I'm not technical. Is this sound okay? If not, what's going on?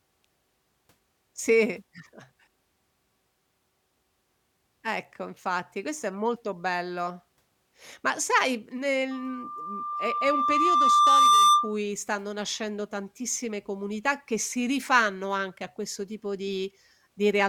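No. From 9.11 to 11.77 s, right after "sai nel", there's a loudspeaker feedback squeal: the microphone picked up its own speaker and looped. Unlike a steady hum, this 1.2 kHz tone swells over about two seconds, then stops before "stanno nascendo tantissime comunità".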